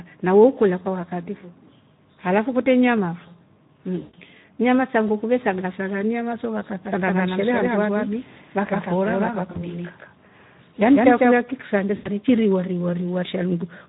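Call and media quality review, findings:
Speex codec at low quality throughout: too few bits for the excitation, consistent with roughly 11 kbps, so speech sounds noisy and hoarse, with audible codec roughness.

VoIP packet loss concealed by the speech codec at 4.01–4.17 s, 9.51–9.68 s and 11.95–12.08 s: the decoder extrapolates the last pitch and filter, so the sound smears into a fading buzzy tone or coloured noise.

Doubled audio track, 6.85–11.37 s: likely a second capture path mixing an equal-level copy about 150 ms late, with a dry echo that starts and stops abruptly.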